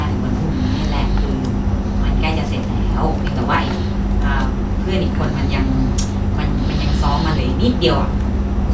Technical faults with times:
none

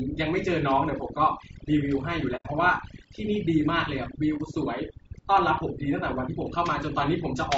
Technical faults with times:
0.00-7.57 overdone noise removal
0.00-7.57 low-delay AAC compression
2.36-2.46 AAC frame loss with muting
4.37-4.41 AAC frame loss with muting

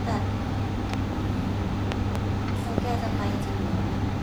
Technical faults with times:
0.94-1.15 loud pop
1.92-2.18 loud pop
2.78-2.80 loud pop

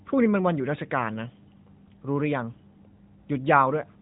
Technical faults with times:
none

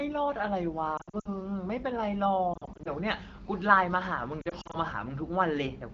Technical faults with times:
0.97-1.30 lost AMR speech frames
2.54-2.90 lost AMR speech frames
4.41-4.76 lost AMR speech frames

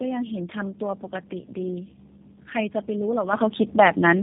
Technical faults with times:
0.00-4.22 tandem speech coding
3.33 microphone volume stepped up

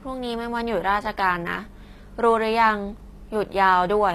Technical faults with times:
0.00-4.15 HE-AAC compression

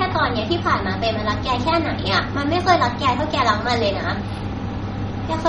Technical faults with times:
0.00-5.48 MP3 compression

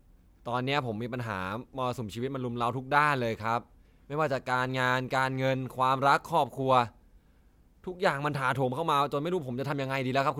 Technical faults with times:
none

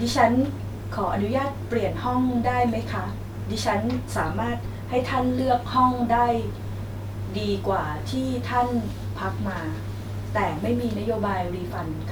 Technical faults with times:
none

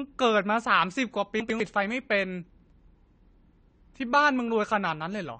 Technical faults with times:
0.00-5.40 AAC compression
1.40-1.60 chunks out of order
2.50-2.70 chunks out of order

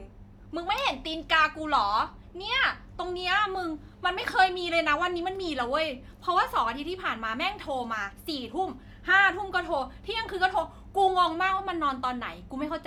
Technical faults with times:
none

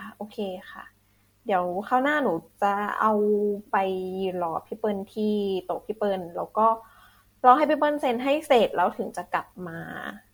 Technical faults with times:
0.00-10.33 generation loss

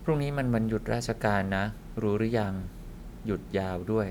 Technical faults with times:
none

